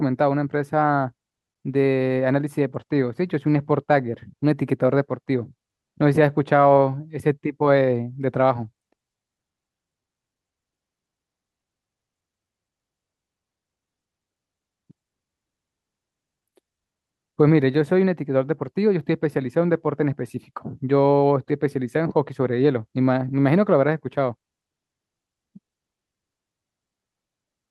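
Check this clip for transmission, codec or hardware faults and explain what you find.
Nothing stood out on listening to this speech.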